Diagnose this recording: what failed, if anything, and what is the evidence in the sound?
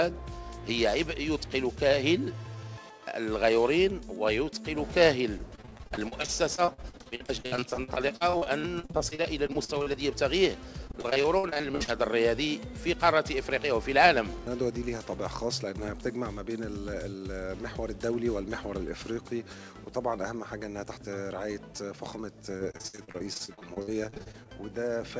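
Repeated packet loss on the network link kept starving the jitter buffer, so concealment kept extending the last sound over holes of up to about 55 ms. The result is choppy, robotic audio at 5.38–9.95 s, 10.87–11.89 s and 22.57–24.50 s, with roughly a third of each stretch patched. The G.722 path's bandwidth stops at 8 kHz.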